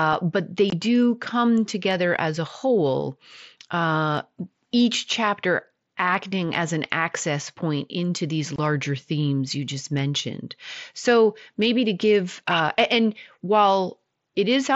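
At 0.70 s, just before "do come together as", and again at 8.56 s, between "access point into these" and "themes you just mentioned", there's unconcealed Bluetooth headset packet loss. Roughly 22.5 ms of the mSBC stream drops out with nothing filling it, leaving a sharp-edged hole.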